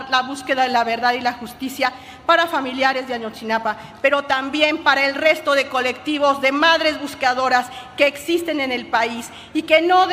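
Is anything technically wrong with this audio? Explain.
No, nothing technically wrong can be heard in this audio, and the signal comes across as technically sound throughout.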